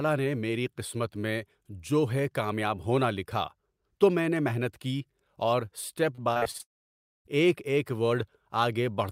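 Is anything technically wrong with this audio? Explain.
Yes, there are two problems, back to back, near the end of this speech clip.

From 6.15 to 6.61 s, right after "کی اور اسٹپ", you get repeated packet loss with that robotic sound. There are six short gaps, the longest about 41 ms, adding up to roughly 140 ms gone. Each time a packet fails to show up, the receiver just stretches the last bit of audio to cover the hole. About 30% of that half-second is this stretched filler, so it comes across choppy, with pieces missing.

Right after that, from 6.61 to 7.27 s, the audio drops out for about 640 ms. There's a brief smeared tail, then roughly 590 ms of silence before the speech returns at "ایک ایک", with the missing part simply skipped. That pattern points to a likely long network dropout, where nothing arrived for over half a second and only the first instant could be papered over before it fell quiet.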